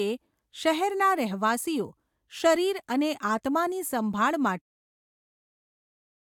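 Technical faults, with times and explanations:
No technical faults heard.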